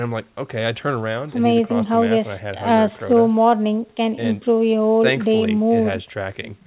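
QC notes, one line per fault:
Nothing stood out on listening to this speech clip.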